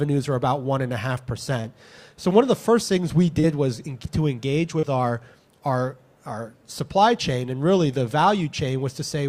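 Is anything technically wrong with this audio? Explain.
Yes. There is short concealed packet loss at 1.61 to 1.66 s, 3.40 to 3.45 s and 4.79 to 4.85 s. About 20 ms of audio is missing at the first point and about 40 ms at each of the others. The receiver covered each gap by extending the preceding sound and then blending back. Each one is heard as a brief smear or wobble. On a spectrogram, each shows as a smoothed, repeated-looking strip. In the waveform, a short stretch of continued sound leads into a crossfade.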